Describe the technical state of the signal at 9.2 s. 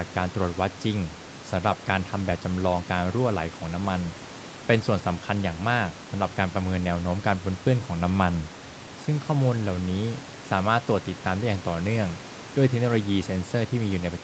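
At 9.2 s the speech comes through intact, with no fault in the signal at that moment.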